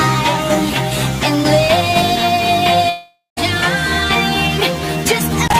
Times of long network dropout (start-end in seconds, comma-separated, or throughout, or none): 2.89-3.39